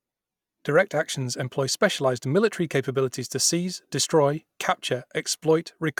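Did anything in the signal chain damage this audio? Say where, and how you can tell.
No, nothing in the signal chain damaged this audio.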